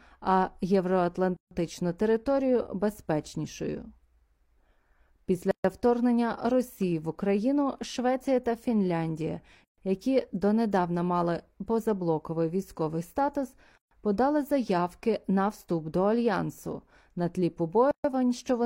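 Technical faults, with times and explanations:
1.37–1.51, 5.51–5.64, 9.64–9.78, 13.78–13.91 and 17.91–18.04 s: gap at a join of encoded pieces. Holes of about 133 to 146 ms recur every 4.0 s, for example just before "подали заявки на". Each separately encoded piece keeps its leading delay and padded final frame. Unlike a dropout, speech resumes from where it stopped, with codec-softened edges.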